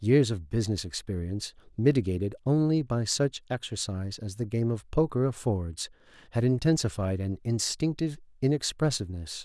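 Nothing stood out as a technical fault anywhere in the speech on listening.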